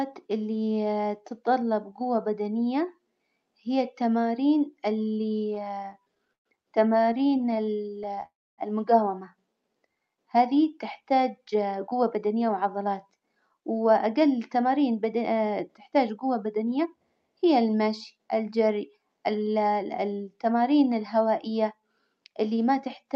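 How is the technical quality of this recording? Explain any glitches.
The recording has several delivery glitches between about 5.5 and 17 s, all typical of a live call link that struggled to receive packets on time.

From 5.45 to 6.47 s there are repeated stalls (stutter). The speech keeps catching and dragging, with about 30% of that stretch held or smeared and the longest hitch about 0.13 s. Packets were arriving late, so the receiver's buffer kept running dry and it stretched the last sound until more arrived.

From 6.93 to 8.24 s the repeated stalls continue as a finer, jittery stutter. The hitches are very short, none longer than about 14 ms, but frequent enough to fill about a fifth of the span. The cause is the same as before: the buffer emptied again and again and was patched with continued sound, so nothing is lost but the flow turns choppy.

From 8.26 to 8.60 s there is a call audio freeze. 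The sound hangs, fades, and goes quiet for about 0.27 s before resuming exactly where it stopped, adding a 0.32 s pause. The likely cause is a burst of packets being held up in transit, which emptied the jitter buffer completely.

From 11.39 to 16.95 s, between "هذي تحتاج" and "هي المشي الجري", there is a jitter buffer speed-up. The speech sounds slightly hurried, running about 7% fast at unchanged pitch. The buffer held more audio than it aims for, so the receiver trimmed tiny pitch-period slices to catch up, removing roughly 0.4 s in total.

The call codec's band limit at 8 kHz is audible as a lack of top-end air.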